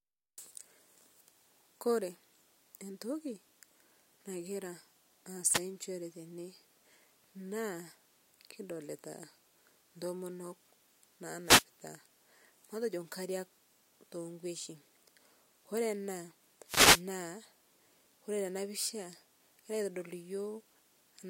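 Wireless microphone noise hits occur at 5.46 to 5.65 s, 11.44 to 11.65 s and 16.65 to 17.04 s. Each is a brief swish of static over the speech as the FM radio link fades and receiver noise rises, the last lasting roughly twice as long.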